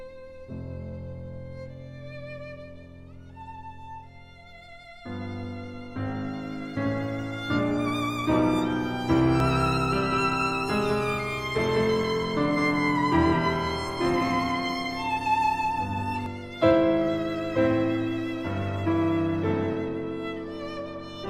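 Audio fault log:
9.4–16.3 s, doubled audio track: a second full-band copy of the sound runs around 200 ms behind the first, roughly 5 dB quieter, with no decay or room colour and abrupt entry and exit, likely from a slower capture path recording the same signal twice.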